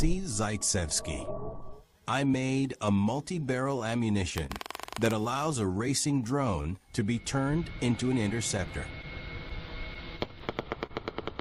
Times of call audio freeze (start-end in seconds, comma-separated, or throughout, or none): none